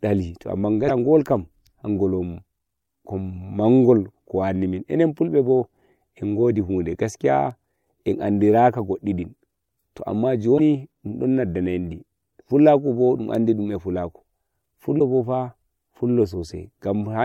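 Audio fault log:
0.88–0.91 s, 10.57–10.60 s, 14.98–15.01 s: broken MP3 bit reservoir. Frames were likely dropped from the stream, so following frames reached back for borrowed data and decoded the wrong bytes. The speech jumps ahead, leaving a brief glitch of about 30 ms, roughly one 26 ms MP3 frame; the second lands just before "dun don".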